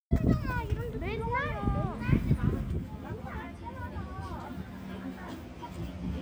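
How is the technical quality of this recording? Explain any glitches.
The recording has a channel delay (comb filtering) fault. From 2.72 s to the end, one channel runs about 10 ms late and the two are summed to mono. Shared content cancels at evenly spaced frequencies starting around 40 Hz, leaving fixed notches that make the sound hollow and phasey.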